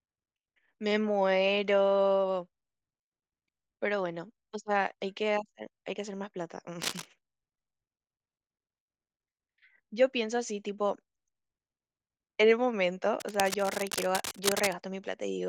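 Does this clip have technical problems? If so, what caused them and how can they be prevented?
Yes, cable scratch noise: scratchy bursts at 6.82–7.06 s, nearly as loud as the speech, and 13.20–14.75 s, quieter, likely a worn connector shifting. Secure and replace suspect leads.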